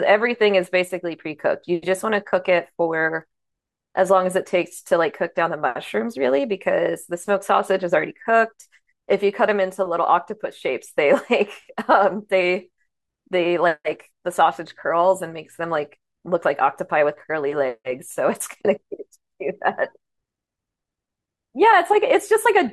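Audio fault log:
No technical fault can be heard in this speech recording, and the signal stays steady and continuous from its first moment to its last.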